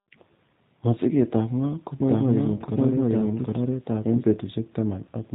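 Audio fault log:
Throughout, G.729 codec: the speech is squeezed into 8 kbit/s and rebuilt from a filter and pulse model, so it sounds rough and synthetic, with nothing above 4 kHz.
2.00–4.24 s, doubled audio track: a second full-band copy runs about 0.7 s behind at roughly equal level, with no room colour, starting and stopping abruptly. It's likely a slower second capture path.
2.56–2.63 s, VoIP packet loss concealed by the speech codec: about 30 ms goes missing, which fits a single lost packet. The decoder stretches the last sound into a fading buzzy tone or coloured noise, and the voice stays weak or distorted for tens of milliseconds or more afterwards.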